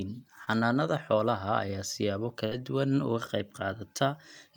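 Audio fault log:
0.44–0.48 s, short concealed packet loss: a brief smear or wobble just before "xoolaha ayaa siyaabo". About 20 ms of the stream arrived too late to decode, so the receiver stretched the preceding sound over a 23 ms patch and then blended back into the real audio.
2.46–2.52 s, burst of packet loss: right after "xoolaha ayaa siyaabo", the sound hangs and fades before jumping to "duwan uga qayb". Roughly 60 ms of consecutive audio was lost. The receiver extended the last sound for 57 ms while turning it down, then resumed further on with that stretch missing.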